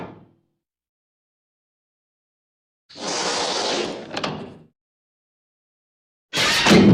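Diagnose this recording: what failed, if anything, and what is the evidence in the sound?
Nothing failed; no fault is audible anywhere.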